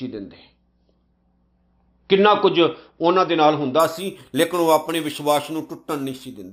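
Speech; from 3.80 s to the end, sample-and-hold upsampling from 12 kHz to 48 kHz repeats samples unsmoothed, so imaging adds a metallic fizz at 6 to 12 kHz, about 17 dB down.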